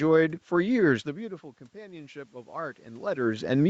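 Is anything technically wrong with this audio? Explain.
Yes. From 1.04 to 3.55 s there is automatic gain rising: after the speech level falls about 20 dB near 1 s, the gain control slowly adds about 7 dB. Unlike a talker simply coming closer, the room noise swells along with the voice.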